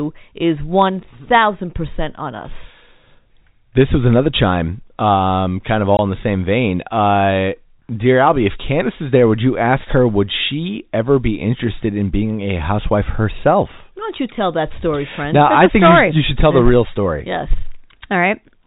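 A speech clip carrying a single packet loss filled with silence at 5.97 to 5.99 s, between "chime um kind of" and "in the same vein". For 20 ms the sound simply drops out, a gap that fits two lost 10 ms packets, with hard edges. A waveform shows a flat line cut cleanly into the speech; a spectrogram shows a thin vertical blank band. The G.711 telephone coding keeps everything below 4 kHz.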